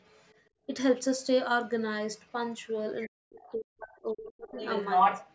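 From 0.0 to 0.4 s a faint second voice sits about 30 dB under the speech. This is the other side's voice leaking through, likely loudspeaker output that the echo canceller left in the microphone signal. It returns at 1.18 to 1.27 s and 2.13 to 2.33 s at about 35 dB down, and at 2.62 to 2.69 s at about 40 dB down.

Between 0.5 and 0.67 s the room tone dips by up to about 20 dB for roughly 150 ms and then comes back. This is background gated by the echo canceller: it pulled the microphone down hard while the loudspeaker was active, then released.

From 3.06 to 4.58 s the talker's speech is pushed down by as much as around 40 dB. This is speech suppressed in double talk. The canceller likely could not separate the near voice from the echo and attenuated both. Inside that span, at 3.45 to 3.56 s, the far voice leaks through at about 25 dB down.

At 4.54 to 5.34 s the leak becomes about 5 dB louder than the speech. 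The echo dominates the ending, band-limited like the rest of the call path with nothing above 8 kHz.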